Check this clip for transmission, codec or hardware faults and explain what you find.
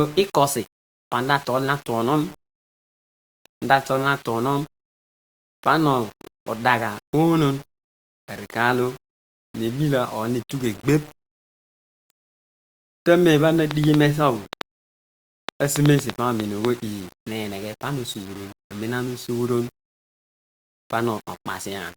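Two faults are audible in this speech clip: a grainy quantisation distortion throughout, and a short burst of clicks in the second half.

Low bit depth without dither runs through the whole clip. The speech sits on about seven bits of resolution, likely rounded with no dither, so the error tracks the signal. Quiet syllables turn gritty and decays sputter. The distortion sits only around 25 dB below the speech. Unlike hiss, it vanishes in pauses instead of staying constant.

A train of clicks runs from 13.71 to 16.66 s. It is about ten sharp, similarly shaped pops at an uneven pace averaging 3.75 per second, peaking well above the speech. The likely cause is pulse interference from nearby equipment. Unlike random crackle or dropouts, the clicks share one shape and continue through pauses.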